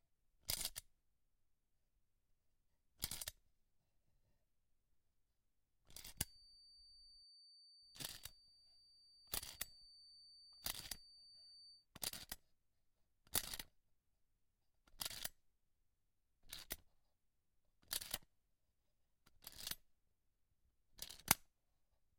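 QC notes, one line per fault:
6.12 to 11.87 s, feedback whistle: a thin, steady tone around 4.6 kHz hangs behind the sound, roughly 20 dB down, swelling and fading slowly in level. Likely a speaker-to-mic loop sitting just at the edge of feedback, ringing on one frequency without running away.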